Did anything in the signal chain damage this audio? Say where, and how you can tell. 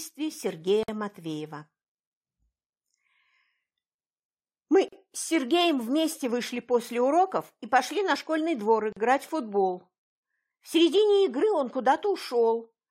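Yes. Three short holes open in otherwise continuous sound, at 0.83–0.88 s (about 52 ms), 4.88–4.93 s (40 ms) and 8.93–8.97 s (40 ms), spaced 4.0 s apart. Their edges are abrupt but slightly smeared, and the sound resumes exactly where it stopped. This is a gap at a join of encoded pieces. The audio was encoded in 4-second chunks and concatenated untrimmed, so each chunk's encoder start-up delay and final-frame padding survive as silence at every seam.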